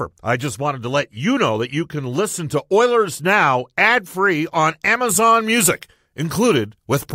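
A speech clip where, from 5.09 s to the end at 7.15 s, just after "ad free on", pre-emphasis is left on: the CD 50/15 µs treble boost was never undone, lifting 10 kHz about 8 dB above 1 kHz. The sound turns thin, bright and sibilant. A spectrogram shows the band above roughly 3 kHz markedly denser from that point, and the waveform gains sharper, spikier transients.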